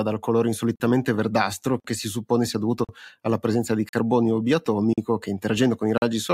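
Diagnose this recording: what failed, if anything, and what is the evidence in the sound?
The chunked delivery or playback stage failed: the speech was handled in segments of about 1.0 s, and a gap between chunks opens at every join instead of the segments running back to back. Silent holes of 44 ms with hard edges cut in at 0.76, 1.8, 2.84, 3.89, 4.93 and 5.98 s. The first falls after "dal colore" and before "verdastro che si suppone", and another follows "alla presenza di". The speech is interrupted at each join, a pattern that fits padding at segment boundaries or a player starting each chunk late.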